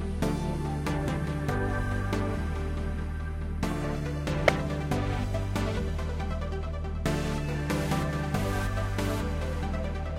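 At 1.07 to 1.09 s, compressed frames were skipped. A short run of encoded frames never reached the output, either because they were missing from the stream or because the decoder rejected them as damaged, so playback jumped ahead by roughly 20 ms of sound.

At 4.47 s, a corrupt frame was decoded. A few frames carrying flipped bits were accepted and played. The decoder misread gain values and spectral codes, so it put energy in the wrong frequency regions for that brief stretch. The result is a quick glitch of misplaced energy that peaks at about -10 dBFS.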